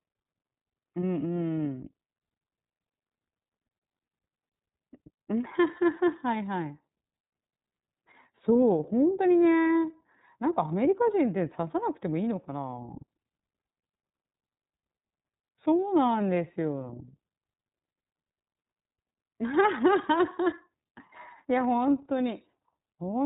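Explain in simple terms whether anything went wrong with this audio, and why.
Yes, something went wrong. The speech passed through the iLBC codec, a phone-call compressor. Everything above 4 kHz is gone, so it sounds thin and muffled. It also sounds rough and slightly robotic from start to end, because the sound is squeezed in short chunks.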